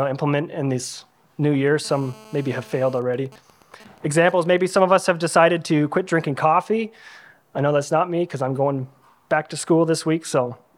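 GSM phone buzz runs from 1.85 s to 2.99 s: a hard, raspy buzz at about 217 Hz, dense with harmonics and unrelated to the programme sound, sitting roughly 25 dB below it. A 2G handset close by is in a call, keying its transmitter in bursts 216.7 times a second, and the audio circuitry rectifies those radio pulses into this steady tone. GSM signalling bursts follow from 3.02 s to 4.82 s, where the continuous buzz gives way to even ticks with a longer 217 Hz buzz twice a second, at around the same level, some 25 dB down. The phone is still in the call, but with its user silent it sends only short groups of bursts, and the same rectification turns each group into a tick or a buzz.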